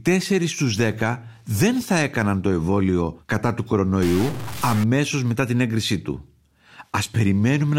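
After "το εμβόλιο κατά του", from 4.02 to 4.84 s, the speech turns harsh and buzzy, with sample errors of about -25 dBFS, likely a stuck bit.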